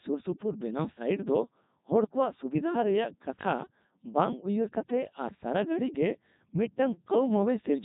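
From the start, the whole clip has gone through the Codec 2 vocoder, and the sound fits its top 3.2 kbit/s mode. Codec 2 doesn't keep the waveform. It sends pitch, voicing, energy and a rough spectral envelope, and the decoder rebuilds the speech from a bank of sine waves. The damage here is heavy: the speech comes out robotic and buzzy, with a synthetic edge throughout.

Then, from about 2.02 to 2.14 s, you get bit errors on digital voice radio. At this low a rate every bit carries frame-level pitch, level, voicing or spectral information, so a handful of flipped bits wreck whole frames at once. The burst sounds like it hit around four frames, at an error rate of roughly a couple of percent. It comes out as a short warbling, bleepy garble, with the pitch, loudness and tone colour lurching about before the vocoder settles again.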